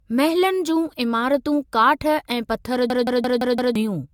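Right from the start the speech has a swirly, hollow, smeared quality, with blurred consonant attacks and nothing above 17 kHz. That's generation loss, likely from AAC-LC at 96 kbit/s being decoded and re-encoded around five times, each pass adding fresh quantisation damage.

Then at 2.90 s, just after "इमारतूं काठ ऐं पथर", a system hang loop kicks in: one 0.17 s chunk repeats exactly five times until 3.76 s, a stutter at about 5.9 Hz, which fits an 8192-sample ring buffer cycling while everything froze. Roughly a second of audio is lost.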